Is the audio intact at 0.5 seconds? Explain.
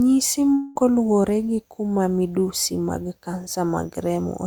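No. From about 0.53 to 0.77 s the speech breaks into a long network dropout, likely from about 0.22 s of audio never arriving. The receiver papers over the whole gap by stretching the last sound into a fading buzz or hiss, with no stretch of true silence, and then the speech resumes at "luwore gi kuma midusi" with the missing part simply gone. Unlike a brief packet-loss click, the fill lasts long enough to decay.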